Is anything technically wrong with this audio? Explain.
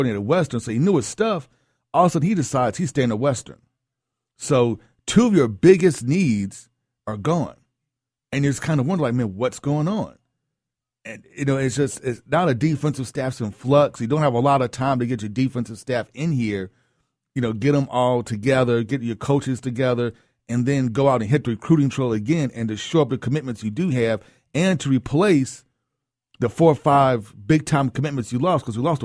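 No, nothing technically wrong can be heard anywhere in this speech recording.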